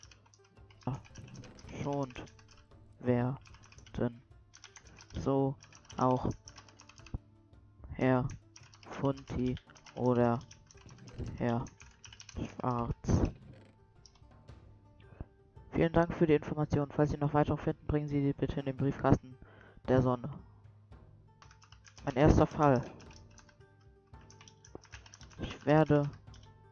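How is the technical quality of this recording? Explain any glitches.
Nothing to flag here: no glitches turn up anywhere in the recording, so there's nothing to explain.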